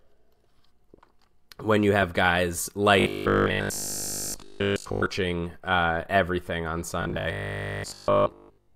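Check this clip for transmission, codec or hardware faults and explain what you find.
The speech has one kind of fault, robotic sound from repeated short buffers, in two stretches: 3.00 to 5.06 s, where essentially all of it is affected, and 7.02 s to the end, where most of it is. A rigid, metallic 50 Hz buzz loosely tracks the speech. The likely cause is audio arriving too seldom, so a 20 ms segment is looped and fresh audio is skipped. The waveform shows a repeating 20 ms cycle, and a spectrogram shows flat, evenly spaced harmonics at multiples of 50 Hz.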